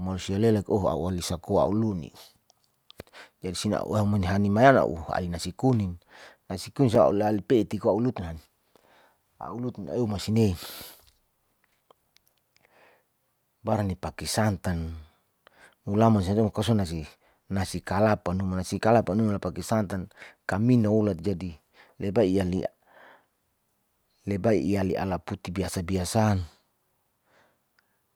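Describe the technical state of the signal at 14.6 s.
At 14.65 s there's a block of digital silence, about 5.3 ms of zeros, which fits a 256-sample buffer not filled in time, so it's heard as a tick or dip.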